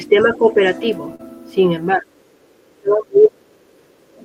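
From 0.09 to 0.57 s the speech dips slightly, by about 5 dB at most and for roughly 0.3 s in total. This is speech suppressed in double talk, likely because the echo canceller ducked the near talker while the far end was also active. Inside that stretch, from 0.2 to 0.27 s, a faint second voice can be heard about 25 dB below the speech. That is the other side's voice leaking through, likely the part of the loudspeaker signal that the canceller failed to subtract.

At 1.15 to 1.21 s there is a brief smear where the sound is stretched rather than heard cleanly. This is short concealed packet loss. About 40 ms of audio never arrived, and the decoder patched 35 ms of it by extending the preceding sound before rejoining the real signal.

From 1.97 to 3.70 s the speech is pulled down much harder, by about 25 dB at its deepest, and the ducking covers around 1.5 s. This is the same speech suppression in double talk. 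The canceller likely treated the overlapping talk as echo and attenuated the wanted speech along with it.

Between 3.98 and 4.16 s the room tone sinks by about 13 dB for roughly 150 ms, then comes back. This is background gated by the echo canceller, which clamped the microphone while the loudspeaker was playing and released it shortly after.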